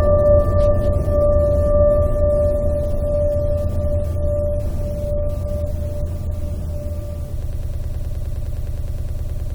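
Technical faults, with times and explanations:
7.43 to 9.55 s, broken-record loop: the music locks onto a fragment about 104 ms long and repeats it exactly, back to back, about 20 times until the clip ends. That's likely a stalled player or stream resending its last buffer, so the music that should have followed is simply gone.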